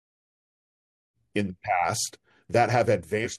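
A short bit of speech that fades in smoothly from around 1 s to full level at 1.18 s, then right near the end, from 3.21 to 3.27 s, there's a quick glitch from damaged data in the compressed stream. Some bytes in that stretch were lost or garbled, so the decoder couldn't read those frames properly, lost its footing and had to hunt for the next valid frame header before normal audio resumed.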